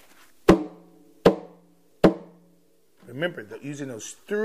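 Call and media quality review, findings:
No faults found in the reviewed audio. Nothing in the clip calls for a fix.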